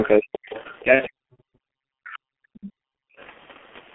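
Short speech clip carried through a G.723.1 codec across its whole length. The band stops at about 3.4 kHz with little below 200 Hz, and the heavy coding damage leaves the voice muffled, hoarse and smeared at the consonants, consistent with a bitrate of around 6.3 kbit/s and slow 30 ms frame updates. A second, quieter voice, likely the other side's voice leaking through from the loudspeaker past the echo canceller, appears at 0.03 to 0.09 s, 0.46 to 0.83 s, 2.07 to 2.12 s and 2.54 to 2.73 s. It sits roughly 15 to 25 dB below the main talker. From 0.83 to 2.71 s the main voice dips, for about 1.5 s in total and by as much as roughly 40 dB at the deepest point. This is likely speech suppressed in double talk, with the canceller attenuating the near talker while the far side was active. At 0.95 to 1.02 s there is VoIP packet loss concealed by the speech codec. The decoder extends the last sound to fill the gap, which points to a single lost 30 ms frame, and the voice stays weak briefly afterwards. 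From 2.99 to 3.18 s the background drops by about 40 dB for roughly 0.2 s and then returns, which is background gated by the echo canceller clamping the microphone.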